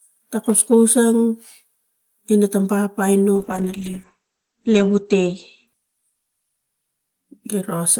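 A speech recording with a call bitrate drop from 3.39 s to 6.81 s. The speech turns rough and watery and loses its top end, because the encoder was forced to code far more coarsely, which fits a fall from roughly 40 kbps to 10 kbps, and it held its lowest rate for about 1.6 s. On a spectrogram the energy above 8 kHz vanishes, leaving a flat ceiling where the coded band previously reached 20 kHz.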